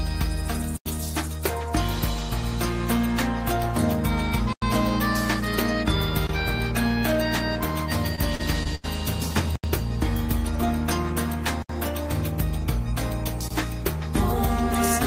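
Blocks of digital silence at 0.77–0.86 s and 4.53–4.62 s (each about 93 ms, which fits a 4096-sample buffer) and at 6.27–6.29 s (about 23 ms, consistent with 1024 samples): output samples were replaced by zeros, most likely because the buffer was not filled in time. The sound drops abruptly to nothing and returns with no fade. The longer blocks are heard as short holes.

Repeated packet loss (robotic sound) from 8.15 to 8.86 s: four gaps in quick succession, totalling about 160 ms and the longest about 84 ms, were each patched by extending the preceding sound. Roughly 23% of this stretch is concealed material, so the audio turns choppy, with pieces missing between the stretched fragments.

Further blocks of digital silence occur at 9.56–9.64 s (about 82 ms), 11.62–11.69 s (about 70 ms) and 13.48–13.51 s (about 23 ms, again fitting a 1024-sample block). Each is a hard cut to zero and back. 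The first two are heard as brief dropouts.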